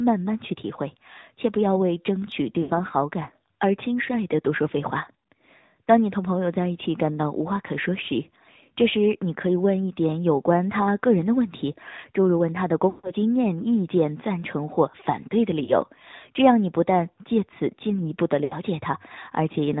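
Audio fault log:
throughout: AMR narrowband mobile codec. The audio is band-limited with nothing above 4 kHz, and the speech has a plainly audible buzzy, synthetic edge. The codec rebuilds each 20 ms frame from a vocal-tract filter excited by a few pulses, and at this quality, which fits the 10.2 kbps mode, the excitation is too sparse to sound natural. The hard 4 kHz ceiling together with that pulse-driven buzz marks it as AMR-NB, not a generic low-pass filter or an MP3-style smear.
2.62–2.72 s, 12.90–13.12 s, 15.64–15.73 s, 18.44–18.56 s: lost AMR speech frames. In each gap the decoder keeps repeating the last good pitch and spectral settings with falling gain, so the sound stretches and fades instead of cutting out. The gaps at 2.62 and 18.44 s fit about 80 ms of missing audio, and the one at 15.64 s is a brief 20 ms dip. The longest, near 13 s at about 140 ms, drawls toward silence before speech returns weak or rough. 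That drawn-out fade, with no click or abrupt hole, sets it apart from a plain dropout.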